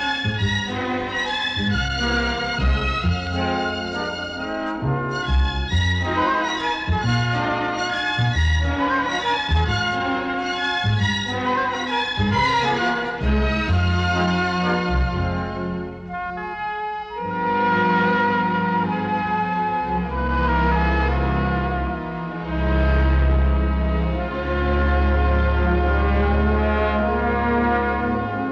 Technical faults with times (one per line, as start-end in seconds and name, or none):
none